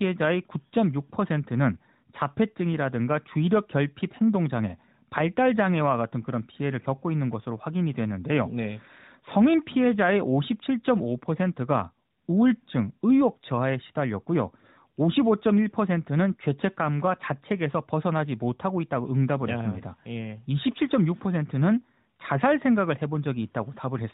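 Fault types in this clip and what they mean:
No fault types are present in the clip.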